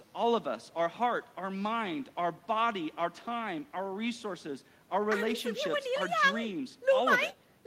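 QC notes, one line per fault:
No faults found on listening; nothing to log.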